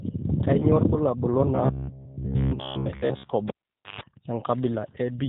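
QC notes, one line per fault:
Throughout: G.729 codec. The top end is gone above 4 kHz, and the speech has that rough, slightly synthetic edge you get when a voice is rebuilt from a vocal tract filter, a pitch predictor and a handful of pulses instead of the real waveform. The damage is plainly audible, and it fits an 8 kbit/s G.729A stream. Breathy or noisy bits warble because the pulse model can't represent them properly.
0.60 to 0.67 s and 2.82 to 2.86 s: VoIP packet loss concealed by the speech codec. Two short gaps got papered over by the decoder. The first hides about 20 ms of missing audio, which fits two 10 ms frames, and the second hides about 10 ms, which fits one. During each gap the decoder keeps extending the last pitch and filter at falling gain, so there's a brief stretched smear that fades. The speech then stays a bit weak for a moment after real audio returns.
1.55 to 3.32 s: robotic sound from repeated short buffers. 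For nearly two seconds the speech goes metallic and rigid, with a steady buzz at 66.7 Hz laid over it. That rate means a 15 ms chunk is being replayed, with most of the real audio in this stretch skipped. The likely cause is new audio arriving too seldom, so the software keeps looping its last buffer. The buzz still roughly tracks the speech, which is why it sounds robotic rather than silent.
3.48 to 4.01 s: cable pulled and plugged in. There's a pop, then roughly half a second of near silence. Before the sound comes back there's a burst of 50 Hz mains buzz lasting about 136 ms, which is the plug tip touching on its way in. A second pop follows as the signal reconnects at 4.01 s. It's the classic live-cable reseat.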